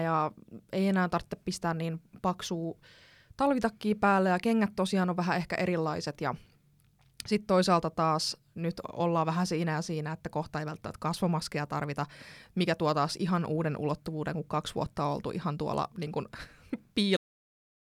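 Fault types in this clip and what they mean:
Cut-off end: the speech just stops dead at about 17.17 s, mid-sound, with no natural decay, and flat digital silence fills the last 0.8 s or so. The final stretch of audio never got written out before the recording was closed.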